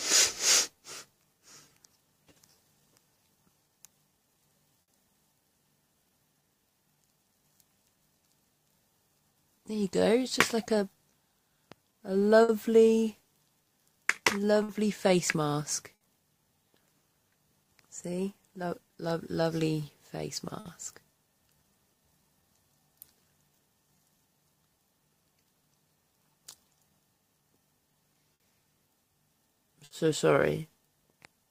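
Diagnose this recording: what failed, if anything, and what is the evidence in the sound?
The sender's clock runs roughly five percent slow against the receiver's. This is clock drift between sender and receiver at the network jitter buffer, which keeps draining and produces small, unevenly spaced hiccups throughout.

Repeated timing corrections: the receiver's buffer keeps stretching the stream from 0.75 to 31.45 s, running at 97% speed and adding about a second.

Short stalls from late packets: the jitter buffer ran empty at 4.82, 12.43, 14.63, 15.95, 20.60, 28.34 and 29.85 s. Each time the last sound is held for 60 ms, with nothing lost, a brief smeared hold.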